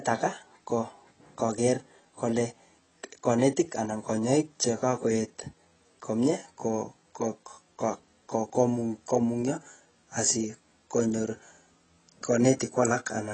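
Throughout, the speech sounds dull, with nothing above 8.3 kHz and smeared, fizzy sibilants, likely from heavy AAC compression at a low bitrate near 20 kbps.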